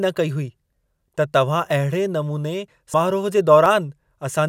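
Audio missing between chunks occurs in this speech clip at 0.73, 1.70, 2.68 and 3.66 s, a tiny skip roughly every second with both sides butted together, losing around 20 ms each time, likely from a recorder handling one-second chunks and dropping a sliver at each handover. Compressed frames skipped at 2.93 s and 4.11 s make the speech lurch forward by roughly 150 ms and 70 ms, consistent with about seven and three 24 ms frames.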